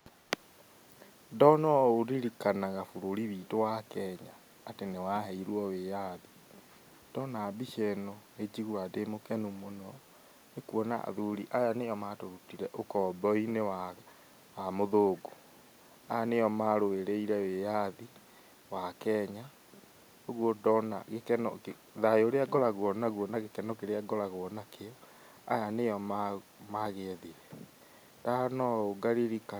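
At 0.1 to 0.3 s and again at 26.42 to 26.6 s, a faint echo leak appears: a delayed copy of the speech, trailing it by 336 ms, sits very low, around 35 to 40 dB beneath the talker. The likely cause is a far-end loudspeaker whose echo canceller let part of the returned signal through. On a spectrogram it shows as a dim, time-shifted ghost of the speech harmonics; the waveform barely changes.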